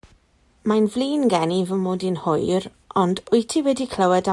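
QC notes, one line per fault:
No faults found.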